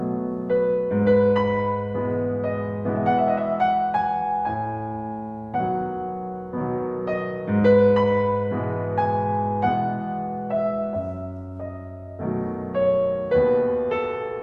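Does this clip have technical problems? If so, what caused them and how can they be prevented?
No, no technical faults here.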